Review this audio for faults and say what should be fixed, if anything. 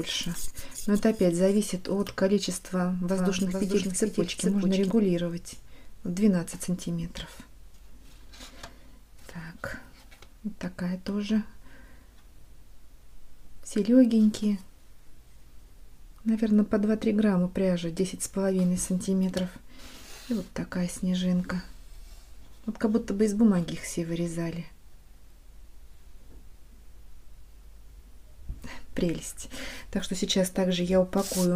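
From 3.08 s to 4.90 s a doubled audio track is heard: a second full-band copy trails the original by roughly 0.4 s at about 5 dB lower, with no reverberant tail, and it cuts in and out abruptly at both ends. The likely cause is the same source being captured again through a slower path. On a spectrogram every feature reappears as a fainter duplicate shifted right by a constant offset; the waveform shows overlapping, staggered envelopes. Prevent it by monitoring or recording each source through one route only.

At 5.68 s there is a repeated buffer: a 1.33 ms piece of sound plays one extra time with a hard join, heard as a click. The length fits a 64-sample buffer that the device replayed because fresh data arrived late. A waveform zoomed in shows a short segment duplicated with a discontinuity at the seam, and a spectrogram shows a thin vertical broadband line. Prevent it by enlarging the buffer or reducing processing load so data arrives on time.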